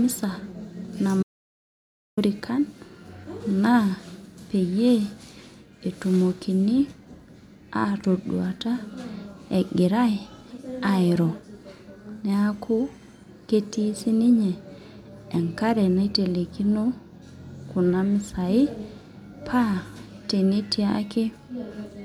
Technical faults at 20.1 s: none

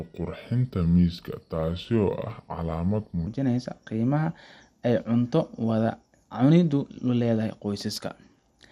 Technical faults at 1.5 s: MP2 compression; section at the wrong speed

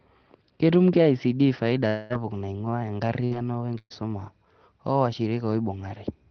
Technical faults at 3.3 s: burst of packet loss; lost packet rebuilt from error correction

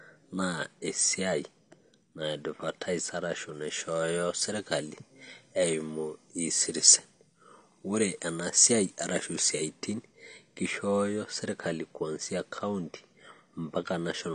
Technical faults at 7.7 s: AAC compression; pre-emphasis left on

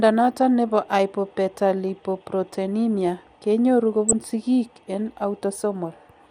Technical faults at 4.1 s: MP2 compression; DAB burbling

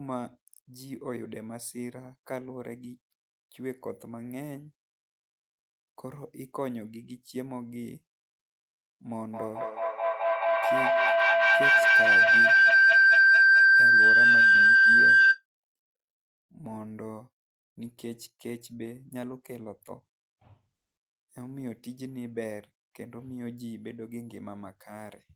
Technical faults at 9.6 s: feedback howl

